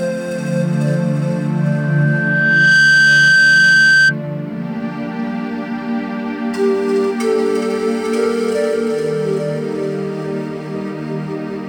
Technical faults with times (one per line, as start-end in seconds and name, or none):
1.59-4.15 loudspeaker feedback squeal